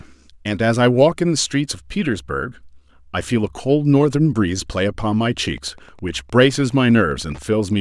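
From 5.31 s to the end of the recording, a nearby Wi-Fi radio couples into the audio circuit, which rectifies its transmissions, producing Wi-Fi interference. The radio's beacon fires every 102.4 ms, so the result is a steady, regular ticking just under ten times per second that sits behind the speech. The ticks stay well below the level of the speech, roughly 35 dB down.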